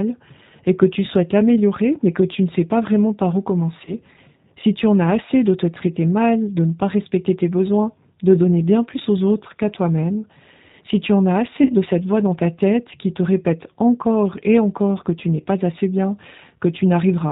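It's a speech clip running through what sounds like the G.729 codec, fitting an 8 kbit/s stream, so it's band-limited, slightly rough and synthetic throughout. There's also VoIP packet loss concealed by the speech codec. Right after "pas vraiment par où", 3.85–3.94 s goes stretched and faded over about 20 ms of lost audio. After "si tu en as", 11.63–11.74 s is worse, with roughly 60 ms stretched and fading before "de cette voix dans".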